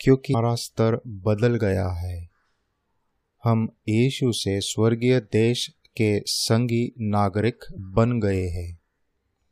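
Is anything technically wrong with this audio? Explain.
Yes. The speech has two short faults from damaged data in a compressed stream, at 0.30–0.35 s and 7.75–7.78 s, each about 40 ms long. Corrupted bytes there mean the decoder misreads or rejects the affected frames, loses sync and has to search for the next valid frame header before normal decoding resumes. Each event is heard as a brief chirp or blip that interrupts the speech.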